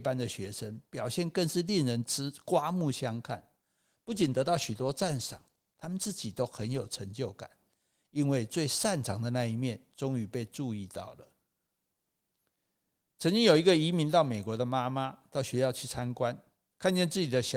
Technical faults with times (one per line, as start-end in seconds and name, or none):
3.88-7.09 call bitrate drop